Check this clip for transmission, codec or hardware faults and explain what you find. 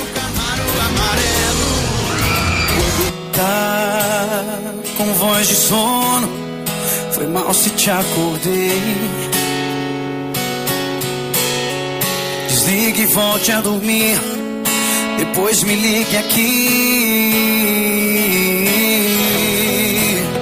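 Nothing here stands out as a transmission, codec or hardware problem, so there's nothing to flag in this one.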